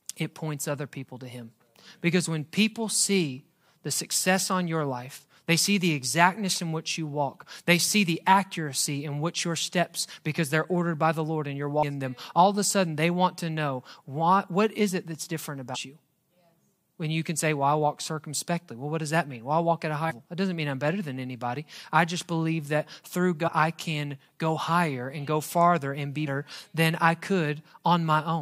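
Damaged data in a compressed stream corrupts a few frames, so the decoder misreads them and hunts for the next valid header. The speech gets brief glitches at 11.82 s, 15.74 s after "is it that's different", 20.10–20.12 s after "I walk at a", 23.47–23.49 s, and 26.26 s after "go farther and be".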